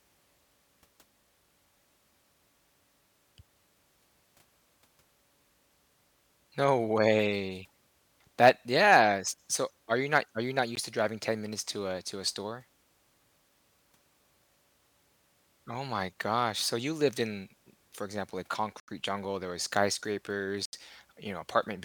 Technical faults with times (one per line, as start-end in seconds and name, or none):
10.75 Bluetooth stall
18.80-18.88 Bluetooth stall
20.65-20.73 Bluetooth stall